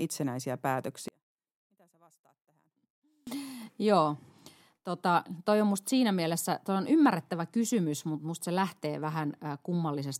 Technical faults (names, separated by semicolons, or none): one channel inverted